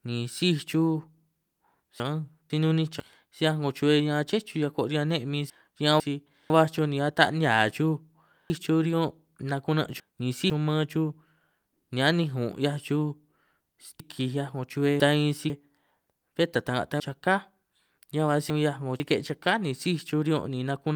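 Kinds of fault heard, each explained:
Chunks out of order: 500 ms speech segments play one to three chunks late, five times, causing jumbled passages with hard joins.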